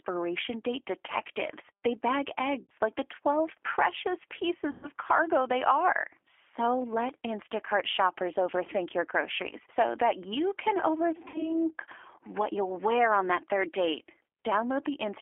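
The whole clip of speech runs through a G.729 codec, specifically G.729A at 8 kbit/s. The line band sits between about 300 Hz and 3.4 kHz, so nothing bright survives. The codec rebuilds each frame from a filter, a pitch predictor and a few pulses. That model throws away fine detail. The damage is plainly audible. The voice sounds rough, thin and slightly synthetic.

VoIP packet loss concealed by the speech codec follows, three times. From 2.63 to 2.71 s, just before "like the", about 60 ms of audio is missing. That fits two lost packets. The decoder repeats its last pitch and filter, so the sound is stretched and fades. From 4.71 to 4.90 s, before "cargo they are", about 120 ms is lost. The stretched sound lasts longer and the voice stays weak as it recovers. From 11.28 to 11.55 s, right after "so that you can", another 60 ms gap gives the same fading, distorted tail.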